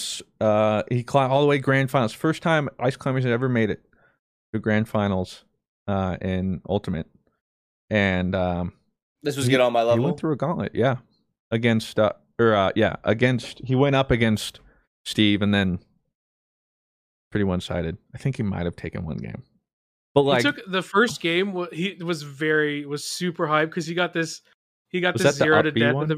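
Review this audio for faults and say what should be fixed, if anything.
Nothing stood out on listening to this speech recording, so there is nothing to point to for fixing.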